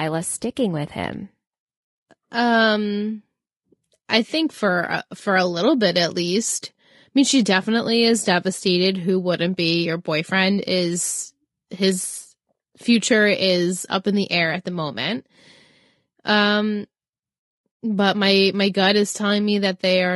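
Throughout the speech the voice sounds rough and grainy, with noise between harmonics, likely from low-delay AAC compression whose short frames, at a rate near 32 kbps, blur pitch detail.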